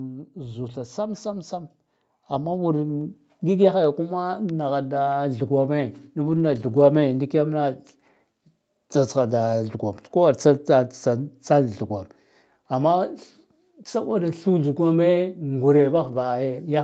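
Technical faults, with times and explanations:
0.33–6.03 s, automatic gain rising: the gain control decided the input was too quiet and eased its gain up by about 14 dB over nearly six seconds, so the speech and the background noise swell together rather than the voice alone getting louder.
6.27–6.85 s, 9.17–9.19 s, 10.39–10.41 s and 15.95–16.25 s, lost packet rebuilt from error correction: packets went missing, but the next ones carried low-bitrate Opus backup copies. You hear no gaps, just brief rougher, noisier stretches, longest at 6.27 s and 15.95 s, where the copies cover about 300 ms and 160 ms.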